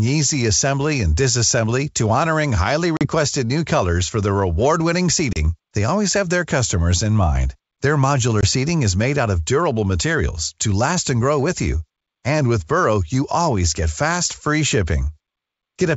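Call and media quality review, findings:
Packet loss on an ADPCM call: hard silent gaps at 2.97–3.06 s (after "disassembly to honoring highly"), 5.33–5.38 s and 8.41–8.45 s, each a few packets. Unlike a clean dropout, the speech resumes slightly distorted while the G.722 decoder's predictor and step size resync.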